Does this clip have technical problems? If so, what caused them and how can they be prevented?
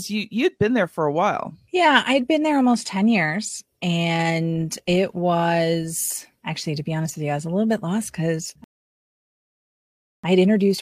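Yes: a rebuffering stall, where playback drained its downloaded buffer at 8.64 s and waited for new data, leaving silence until the speech resumes unchanged at 10.24 s, adding about 1.6 s. Keeping a deeper playback buffer or a bitrate the connection can sustain would prevent it.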